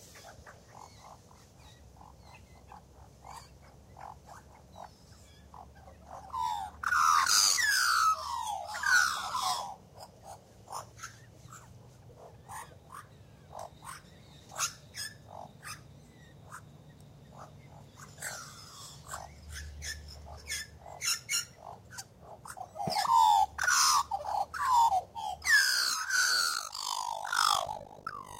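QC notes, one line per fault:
26.54–28.4 s, overlap-add ripple: the level pumps up and down around 50 times a second, with dips of about 60 dB, so the sound breaks into a rough, robotic flutter. The audio was cut into windowed frames and rejoined with an overlap that does not sum to constant gain, so each frame boundary leaves a gap. Unlike a slow tremolo or a mains buzz added on top, the modulation chops the sound itself at the frame rate.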